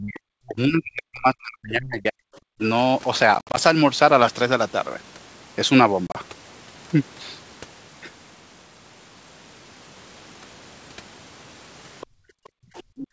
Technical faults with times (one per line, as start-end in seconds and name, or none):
0.00-2.24 speech suppressed in double talk
2.57-2.61 speech suppressed in double talk
3.35-3.58 packet loss on an ADPCM call
6.07-6.16 packet loss on an ADPCM call
12.01-12.06 other side's voice leaking through
12.06-12.97 background gated by the echo canceller
12.75-13.07 other side's voice leaking through